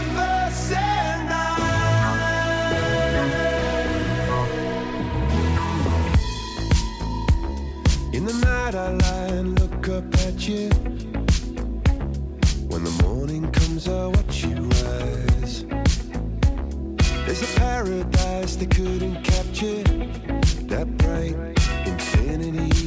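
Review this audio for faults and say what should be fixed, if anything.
No faults found; nothing to fix.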